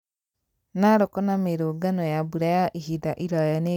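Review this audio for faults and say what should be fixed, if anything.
Nothing here needs fixing, as the speech signal stays continuous and intact across the whole recording.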